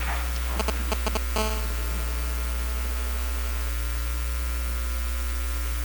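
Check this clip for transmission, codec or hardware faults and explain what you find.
Two related hardware faults, both from a nearby 2G phone whose radio bursts are being picked up by the audio circuit.

GSM signalling bursts, 0.60 to 1.17 s: the phone is signalling, and rectified pulses give galloping dit-dit-dit ticks and short 217 Hz buzzes, roughly as loud as the sound itself.

GSM phone buzz, 1.36 to 3.69 s: the phone is now in a call, bursting steadily at 217 Hz, so you get a continuous raspy, harmonic-heavy buzz about 11 dB below the signal.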